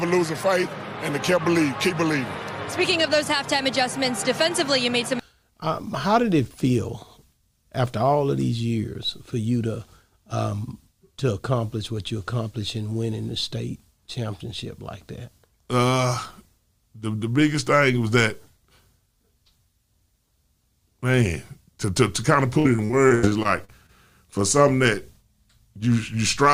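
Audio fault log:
22.59–23.91 s, repeated packet loss (robotic sound): about ten short holes open in quick succession, the longest about 82 ms. Roughly 323 ms is patched by stretching the preceding sound and another 340 ms is simply missing, so the passage turns choppy with pieces missing. On a waveform the envelope is chopped into flat, repeated segments and brief drop-outs. A spectrogram shows smeared, frozen-looking harmonic bands over a quarter of the span, alternating with vertical gaps.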